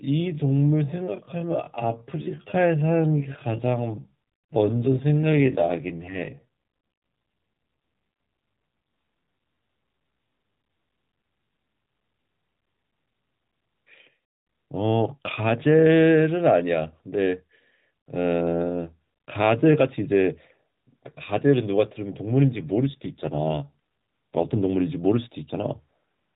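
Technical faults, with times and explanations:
0.00 to 12.06 s, time-stretched section: the opening runs at about 0.58 times normal pace, yet the pitch doesn't drop. That drag is what you get when software likely stretched the audio by repeating short slices to fill a longer slot.
5.30 to 6.46 s and 22.56 to 24.84 s, AMR rate drop: the mobile codec falls from 12.2 kbps to 5.9 kbps, so the voice goes rougher and more synthetic. The bandwidth stays the same and there's no gap, and each time the quality comes back once the rate recovers.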